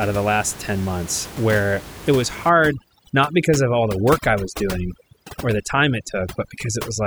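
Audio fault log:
2.49–7.06 s, overdone noise removal. From 2.49 s to the end, the room noise drops away, leaving twinkling specks. A noise reduction stage is clamping down too hard. Any frequency band close to its noise estimate gets pushed far down or switched off. The quieter parts of the speech sit in those bands, so they vanish too. Before 2.49 s the room noise sits about 14 dB under the speech.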